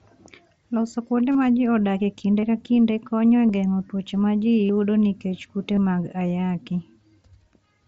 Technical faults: concealed Bluetooth headset packet loss

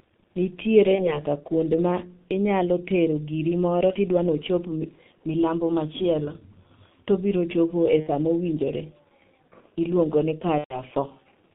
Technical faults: G.723.1 codec; VoIP packet loss concealed by the speech codec

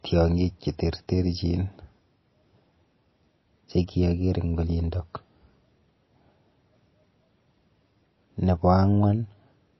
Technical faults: MP3 compression

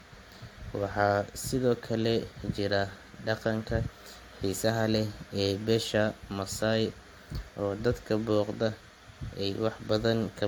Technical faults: generation loss

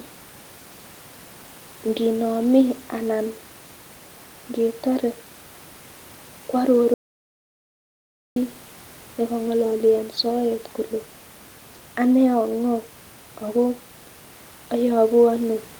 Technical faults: audio dropout to silence

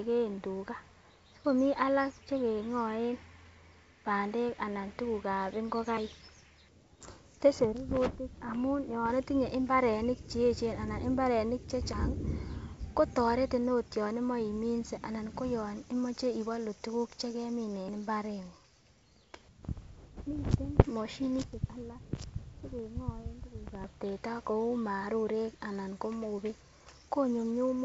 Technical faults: audio missing between chunks

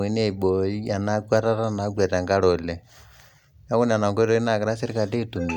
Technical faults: none

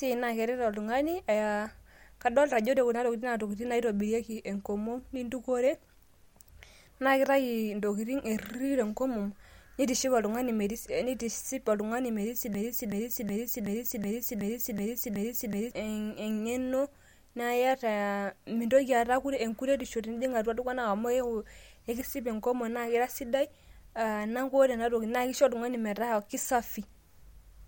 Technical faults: broken-record loop

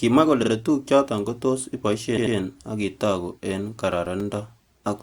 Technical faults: repeated frames; CD scratch ticks

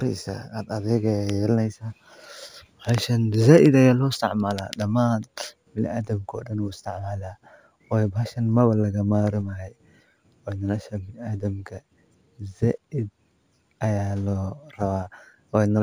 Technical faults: imaging from linear upsampling

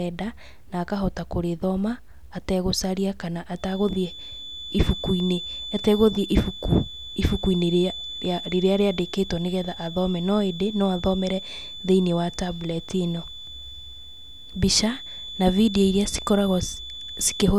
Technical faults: feedback whistle

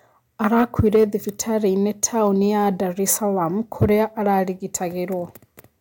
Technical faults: hard clipping

